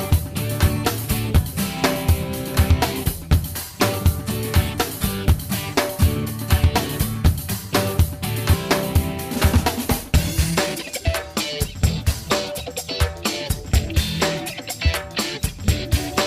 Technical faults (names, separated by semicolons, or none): skip ahead; jitter buffer speed-up